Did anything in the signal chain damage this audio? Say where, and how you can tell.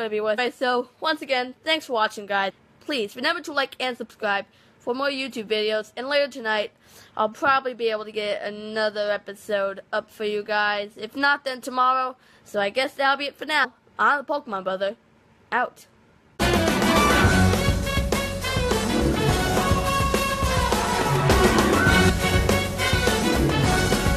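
Yes. At the codec stage, compressed frames were skipped: whole 23.2 ms frames were missing or rejected by the decoder. The audio jumps ahead roughly a third of a second at 0.37 s, 2.49–2.51 s and 22.08 s, and about a tenth at 13.63–13.65 s.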